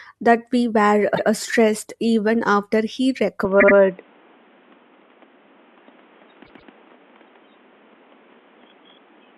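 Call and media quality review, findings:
Repeated frames: stutter at 1.14–1.27 s, after "that we were" and before "uh stressed even after", 131 ms block heard twice; again at 3.59–3.75 s (78 ms block, three plays) and 6.44–6.70 s (131 ms, three plays). Compressed frames written or sent more than once and replayed. Unlike loss concealment, nothing is missing and the audio runs longer.

Input switched to a poorer device: from 3.45 s, after "stressed even after he", a sudden band limit with nothing above 3.8 kHz, a new noise floor roughly 35 dB down, and a level shift of around 5 dB, with no gap at the switch. Likely cause is a capture route change, such as a headset call profile. A codec bandwidth drop would not bring its own noise and level.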